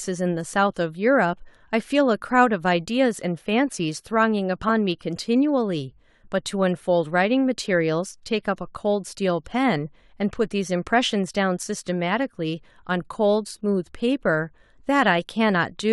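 At 4.68 s, whole compressed frames are skipped: a short run of frames was either missing from the stream or rejected by the decoder as damaged, so it never reached the output. Playback jumps ahead by roughly 20 ms of speech, a whole-frame multiple, and the result is a brief lurch forward at the seam.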